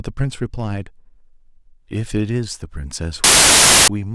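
A speech recording in which file tags are played as audio from 3.24 to 3.88 s: an embedded cover picture's compressed data is read as samples, giving a hard-edged burst of very loud white noise, a solid dense slab on the waveform and a uniform broadband block on the spectrogram.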